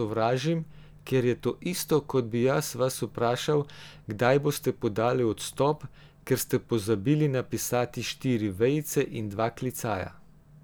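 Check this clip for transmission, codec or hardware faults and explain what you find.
Nothing in the speech points to a transmission, codec or hardware fault.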